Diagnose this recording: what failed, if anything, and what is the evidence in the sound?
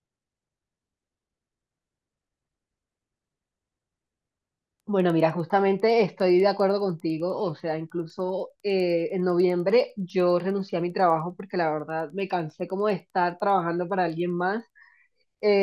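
The fault sits in sample-rate conversion, where the resampler restarted on every block while converting 48 kHz audio to 24 kHz. Throughout the speech there is a steady tick at 10 Hz, one every 100 ms, heard only while signal is present. Each 100 ms block was resampled in isolation, so its edges were filtered against missing neighbours. Unlike buffer underruns, nothing drops out, and the ticks keep strict timing and vanish in pauses.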